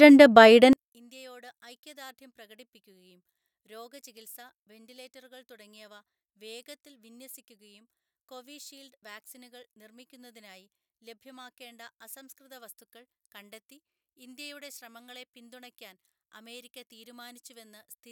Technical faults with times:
0.73-18.11 one channel inverted

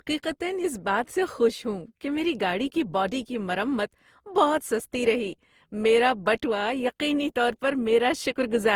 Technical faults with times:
0.00-8.76 generation loss

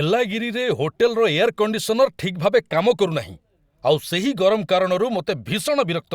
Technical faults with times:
none

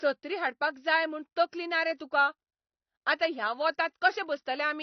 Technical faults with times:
0.00-4.82 AAC compression

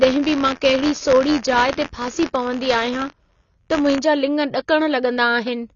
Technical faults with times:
0.00-5.75 AAC compression
0.00-3.99 buffer tearing

